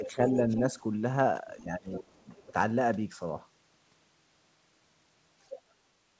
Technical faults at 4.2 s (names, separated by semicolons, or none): none